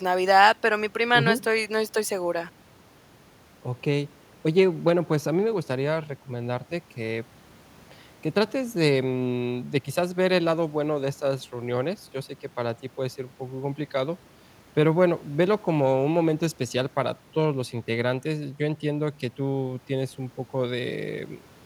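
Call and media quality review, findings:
No findings in the call and media quality review for this speech recording.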